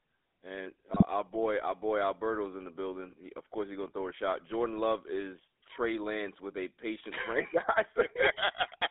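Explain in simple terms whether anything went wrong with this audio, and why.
The whole recording has passed through the GSM full-rate codec, the original mobile phone voice coder. It rebuilds the voice from a simple model driven by coarse pulses and keeps only the band from about 300 Hz to 3.6 kHz, so the speech sounds thin, buzzy and gravelly throughout.

From 0.92 to 1.03 s there are GSM bit errors, just before "our boy our boy". Corrupted data reached the decoder, so for a split second it rebuilt the sound with the wrong tone and loudness, producing a brief squawky, gargling glitch.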